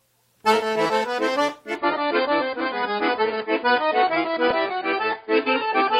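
At 1.75 s the sound abruptly turns dull and smeared, with nothing above 5 kHz and a watery, swirling coarseness, lasting to the end without any gap. This is an adaptive stream at a lower bitrate, consistent with a drop from roughly 96 to 16 kbit/s AAC.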